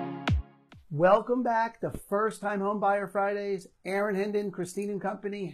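The audio runs cleanly until 0.81 s, then abruptly drops in quality with no gap and stays degraded to the end. This is an adaptive stream at a lower bitrate: the player switched to a lower-rate rendition, presumably because the connection slowed. From that point codec artefacts rise and the top end turns synthetic, which points to a switch from roughly 96 kbit/s AAC to a low-rate HE-AAC stream near 20 kbit/s.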